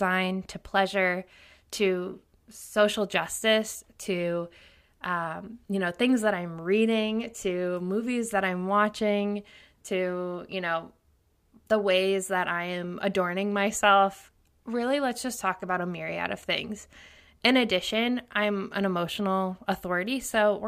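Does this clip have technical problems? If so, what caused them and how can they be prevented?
No, the speech here has no audible technical problems.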